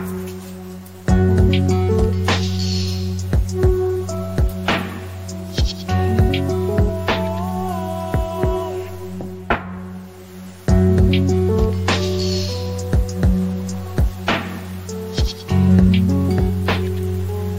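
No technical faults can be heard anywhere in the audio.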